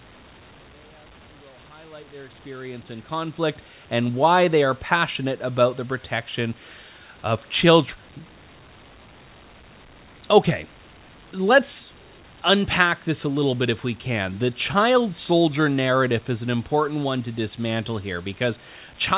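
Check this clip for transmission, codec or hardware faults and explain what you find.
No transmission, codec or hardware faults.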